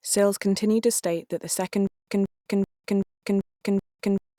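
At 1.87 s the speech turns into a stutter with silent gaps until the end. A 181 ms fragment repeats six times, each followed by 203 ms of silence. The playback likely stalled and kept replaying its last buffer.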